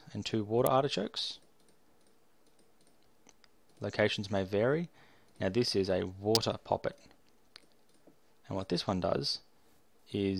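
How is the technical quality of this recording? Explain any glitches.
The recording has two glitches, both electrical switching spikes. At 0.66 s and again at 6.35 s, a sharp snap sits on top of the sound, the second one louder. These are likely short arcs from a nearby switch, motor or static discharge that the audio line picked up.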